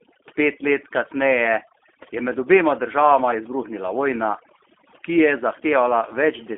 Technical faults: overdone noise removal; G.729 codec

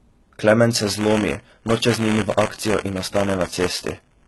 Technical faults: HE-AAC compression; buffer tearing

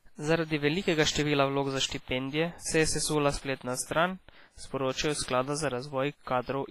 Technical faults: WMA compression; pre-echo

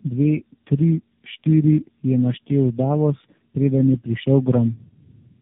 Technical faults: tandem speech coding

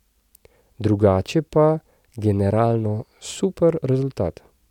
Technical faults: none

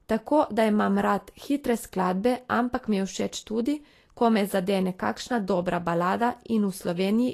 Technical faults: Vorbis compression

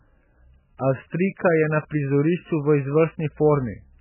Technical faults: MP3 compression

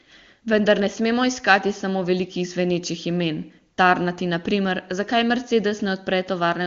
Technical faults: none

